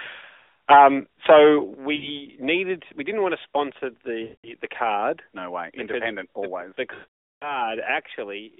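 Speech over a narrowband mobile line, with lost AMR speech frames leaving dips and smeared, fading gaps at 0.4 s (80 ms), 1.96 s (60 ms), 4.24 s (200 ms) and 6.94 s (480 ms), where the decoder holds the last sound and lets it die away. At 1.74 s everything drops about 8 dB in one step, likely the call software turning the microphone volume down.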